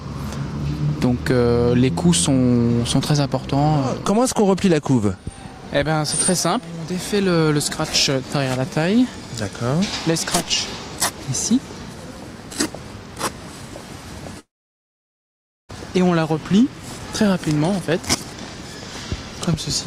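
From 14.39 s to 15.71 s the sound breaks off: the last sound smears into a brief fading buzz or hiss, then 1.2 s of silence, and playback resumes with that stretch lost. This is likely a long network dropout; unlike a short glitch, it decays to silence.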